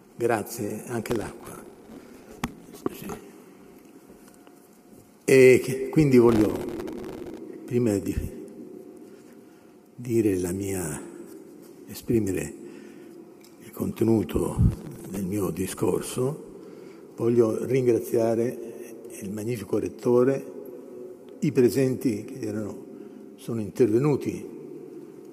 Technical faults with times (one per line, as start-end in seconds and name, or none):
1.03-3.21 processor overload crackle
6.29-7.38 processor overload crackle
14.71-15.17 processor overload crackle